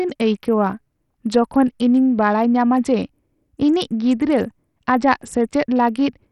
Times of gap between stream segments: none

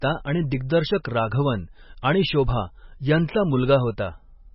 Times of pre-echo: 1.04

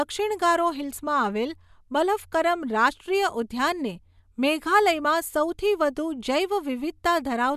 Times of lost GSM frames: none

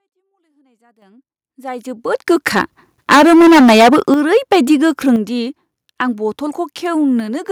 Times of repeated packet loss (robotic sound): none

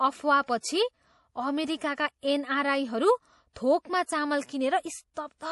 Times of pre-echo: 5.14-5.17

